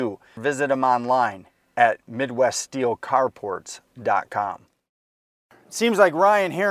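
No technical faults are audible.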